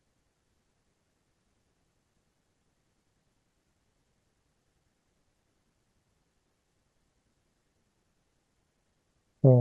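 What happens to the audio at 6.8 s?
At 6.81 s the speech skips forward, with about a tenth of a second gone: audio missing between chunks, likely lost while switching 4-second recording chunks.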